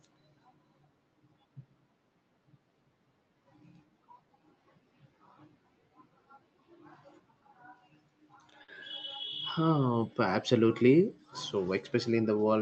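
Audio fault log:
8.63–8.70 s, short stall from a late packet: a packet arrived late, the jitter buffer ran dry, and the receiver filled the gap by stretching the last stretch of speech for about 50 ms, then resumed where it had left off. No speech is lost, but one sound is held too long with a faint buzzy, slightly dipped texture, and everything after it lands about 50 ms later. The call codec sounds like Opus, with speech topping out near 8 kHz.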